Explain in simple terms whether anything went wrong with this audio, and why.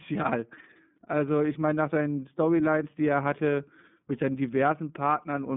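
The speech went through the iLBC codec, a phone-call coder that squeezes sound in 30 ms chunks, each handled on its own. For the whole clip, nothing above 3.8 kHz survives, so it sounds muffled and thin, with a plainly audible rough, slightly synthetic edge.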